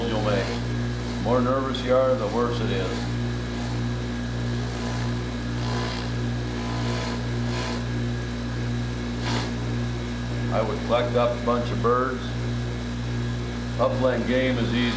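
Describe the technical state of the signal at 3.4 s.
At 3.4 s the signal is intact, with nothing audible beyond the call path's normal band limit, which leaves no content above 8 kHz.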